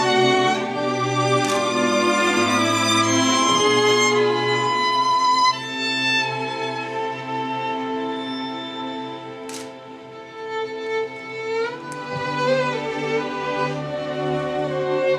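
No technical faults are audible.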